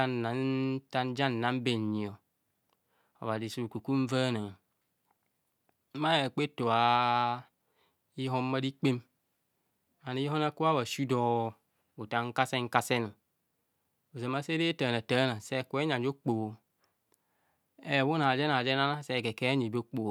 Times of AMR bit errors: none

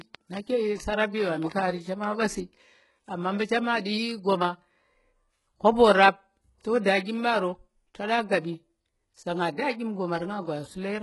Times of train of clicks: 0.01-2.05

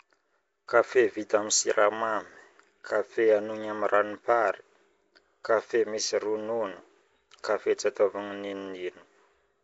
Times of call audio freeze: none

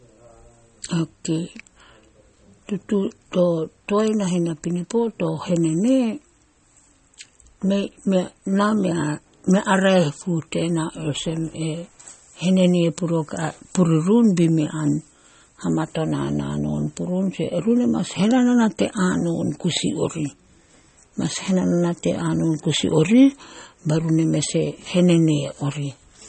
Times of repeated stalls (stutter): none

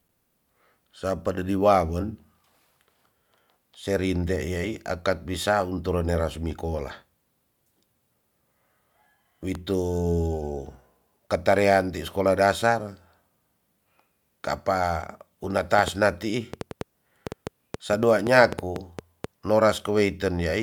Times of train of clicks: 15.79-19.25

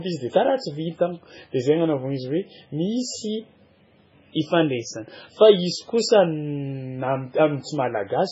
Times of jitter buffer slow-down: none

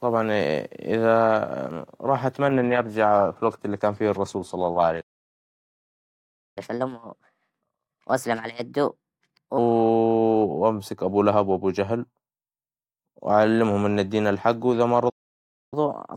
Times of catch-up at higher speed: 6.58-9.58, 15.74-16.16

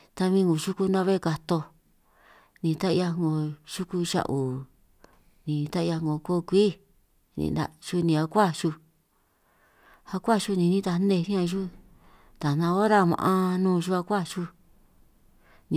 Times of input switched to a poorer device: none

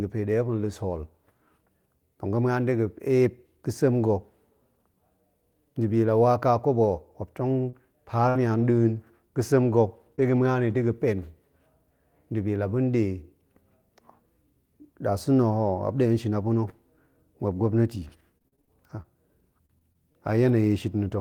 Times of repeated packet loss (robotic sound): 17.94-20.50

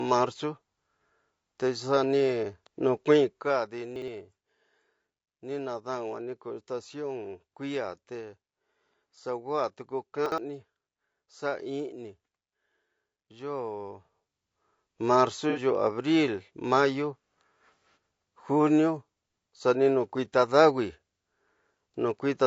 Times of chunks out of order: 3.96-4.08, 10.26-10.38

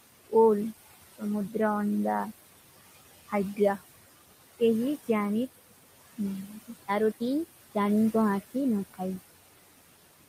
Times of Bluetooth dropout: none

